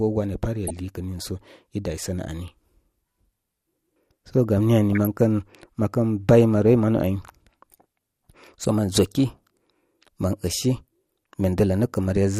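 Throughout, the speech sounds dull and granular, with a gurgling edge. This is likely MP2 compression, with upper bands starved of bits, which fits a rate near 80 kbps.

DAB burbling breaks in at 0.67 to 0.77 s, 4.92 to 5.07 s and 6.98 to 7.09 s. Bit errors corrupt single sub-bands, putting short blips of noise into them.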